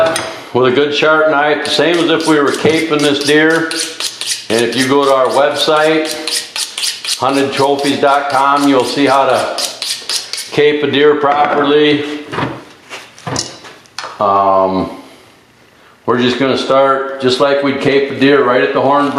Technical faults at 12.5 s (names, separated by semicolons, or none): gain pumping